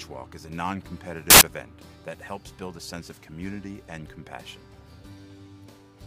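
From 1.30 to 1.41 s, samples built from the wrong bytes: misassembled bytes promote the fast-changing low bits, replacing the sound with broadband noise unrelated to the signal, unlike clipping's distortion.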